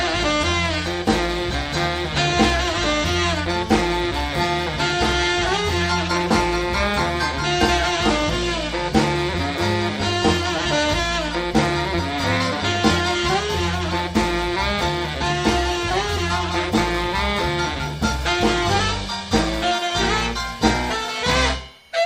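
From 19.31 s to the end at 22.05 s, linear timecode leaks from a neighbouring track or cable into the audio path. It adds a steady chirping warble behind the sound, switching between roughly 1 kHz and 2 kHz, about 40 dB down, which fits 24-frame code.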